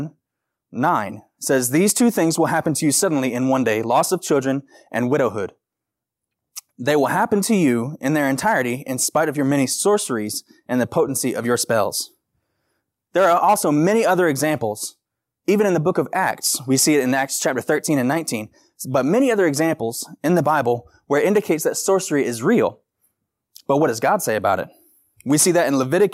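Nothing stood out on listening to this speech recording.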